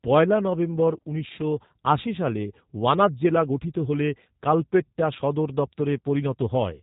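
From start to finish the speech carries G.729 codec damage, and it's plainly audible. The codec rebuilds each 10 ms frame from a vocal tract filter, a pitch predictor and a handful of pulses, which fits an 8 kbit/s rate, so the voice comes out a bit rough and synthetic. There's nothing at all above about 3.8 kHz, which leaves the sibilants dull and the whole thing sounding like a phone line.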